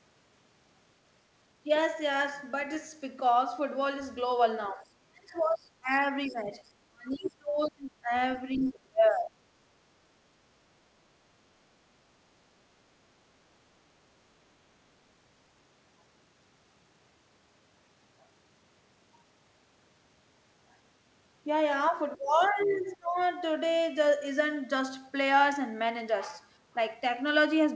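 The speech dips briefly at 1.66 to 1.70 s, then falls away hard from 4.74 to 8.12 s, by about 35 dB at worst, and again at 8.57 to 9.38 s and 21.91 to 23.17 s. That's speech suppressed in double talk, likely the echo canceller ducking the talker while both sides spoke.

In and around those gaps, at 6.26 to 6.34 s, 7.11 to 7.30 s, 22.43 to 22.88 s and 23.19 to 23.25 s, the other side's voice leaks through as faint scraps, roughly 20 to 40 dB under the talker, most likely loudspeaker echo the canceller didn't fully remove.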